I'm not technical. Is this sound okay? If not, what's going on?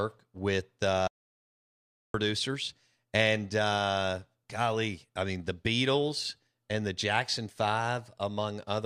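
No. At about 1.08 seconds the speech suddenly cuts out, and it comes back at about 2.14 seconds. That gap of just over a second is total silence, with not even the faint background hum of the room. This is called an audio dropout to silence. The likely cause is that the sound input was lost briefly, perhaps a loose connection or an accidental mute, while recording carried on. Whatever was said then is gone.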